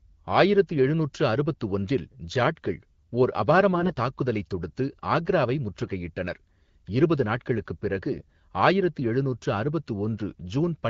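A brief hoarse, gargly scratch roughens the speech from 3.76 to 3.92 s, and a shorter one returns from 5.84 to 5.91 s. Pitch and loudness stay roughly in place. These are AMR bit errors: about one bit in twenty, then about one in twenty-five, arrived flipped in the weakly protected parts of the frames. The frames still passed their check, so the decoder misplaced its excitation pulses and used wrong pitch, gain and spectral values.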